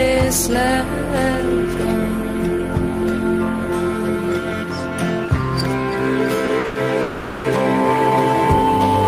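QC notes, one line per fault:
6.45–6.77 s, short stall from a late packet: three holds (6.45–6.49, 6.59–6.66, 6.66–6.77 s) stretch the last sound by 20, 50 and 90 ms while the empty jitter buffer waits, with nothing lost. On a spectrogram the harmonics go flat and smeared, and the waveform shows a repeated, held cycle pattern.
7.01–7.46 s, call audio freeze: the last sound is carried on for 430 ms as a fading buzz, likely from packets held up in transit draining the jitter buffer. It never reaches silence, and the audio then resumes where it stopped. On a spectrogram this is a decaying horizontal smear, and the waveform shows a tapering repetition.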